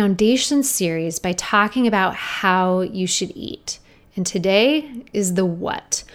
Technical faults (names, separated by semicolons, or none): none